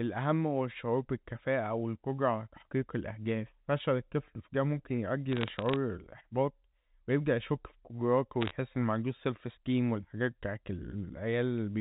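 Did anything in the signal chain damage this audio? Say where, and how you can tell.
Yes. Bit errors on the digital phone line, in transmission after the G.711 mu-law coder, cause crackle from 5.32 to 5.76 s and from 8.41 to 8.51 s. Each flipped sign or high-order bit corrupts one sample. On the waveform these show as lone single-sample spikes, and on the spectrogram as thin vertical lines up to the 4 kHz band edge. The error rate is well under one percent.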